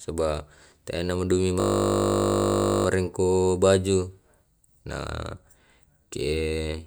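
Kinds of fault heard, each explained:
System hang loop, 1.6 to 2.86 s: the system stalled while the sound hardware kept replaying one 20 ms stretch of its buffer, 63 times in a row, so the speech gives way to a steady 50 Hz buzz before picking up again.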